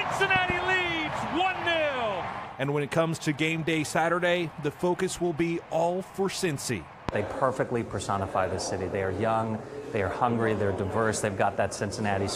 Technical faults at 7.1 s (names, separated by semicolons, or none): loud pop